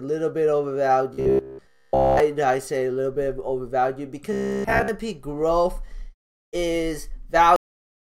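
From 1.14 to 2.20 s and again from 4.33 to 4.88 s, robotic sound from repeated short buffers, likely roughly 15 ms chunks looping most of the time, imposes a rigid, metallic 66.7 Hz buzz. At 7.56 s there is a cut-off end: the final buffers never play, so the sound stops mid-event and drops straight to digital silence with no decay.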